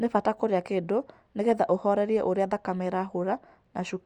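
A short speech recording with nothing technically wrong with it.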